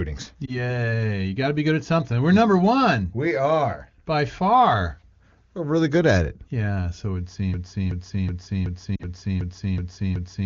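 At 0.45 s there are lost AMR speech frames, a dropout the length of a single 20 ms frame. The decoder fills the gap by reusing the previous frame's pitch and vocal tract settings at falling gain, so the sound dips and warbles briefly before recovering by 0.72 s. Unlike a loop, nothing repeats exactly; the filled-in sound smears and fades.

After "so it would" at 7.54 s, a broken-record loop begins, most likely from a stalled player or stream resending its last buffered fragment. A 374 ms piece repeats exactly, back to back, eight times until the end, and the audio meant for that stretch never arrives. Within the loop, at 8.96 to 9.03 s, lost AMR speech frames recur, this time two frames (40 ms), heard as a short drop toward near silence rather than a clean repeat. The AMR wideband (HD Voice) band itself stays clear, with speech coded up to 6.4 kHz and shaped noise filling up to 7 kHz.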